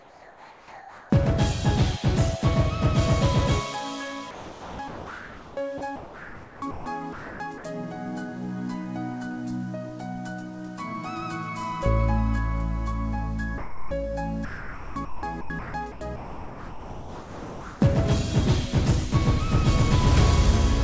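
From 0 to 1.1 s the background is a steady, featureless hiss about 4 dB quieter than what follows, likely comfort noise in place of the background, synthesized while transmission paused. Between 4.31 and 6.86 s, and again from 7.13 to 7.64 s, the sound turns choppy, with holes filled by flat noise. This is likely sound chopped by the voice detector as it toggled sending on and off. At 13.58 to 13.91 s a short stretch of sound vanishes into steady noise, likely sound dropped by the voice detector after it mistook quiet sound for background. From 14.45 to 17.81 s the choppy sound returns, about 2.7 s of it filled with synthetic noise, again likely chopping by the voice detector. Throughout, nothing is heard above 8 kHz, which fits a G.722 call codec.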